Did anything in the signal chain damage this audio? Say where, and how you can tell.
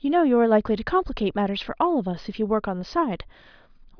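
No, nothing in this speech clip stood out on listening as damage from any stage of the signal chain.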